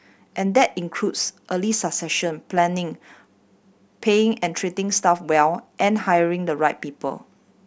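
No technical faults can be heard anywhere in the recording, and the signal stays continuous and stable throughout.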